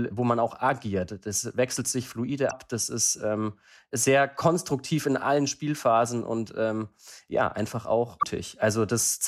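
At 2.47 to 2.53 s and again at 8.17 to 8.23 s, damaged data in the compressed stream makes the decoder misread corrupted frames and lose sync, producing a brief glitch.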